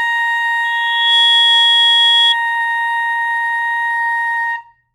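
A microphone re-amplified its loudspeaker from 0.64 to 2.35 s: loudspeaker feedback squeal, a 3.3 kHz tone swelling over half a second above the music.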